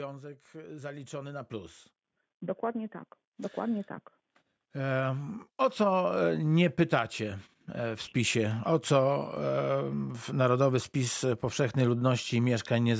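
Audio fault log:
0.52 to 6.27 s: automatic gain rising, the gain control judged the input too quiet and raised gain by about 14 dB, so speech and background swell together.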